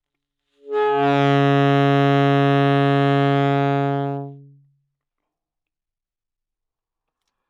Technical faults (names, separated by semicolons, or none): none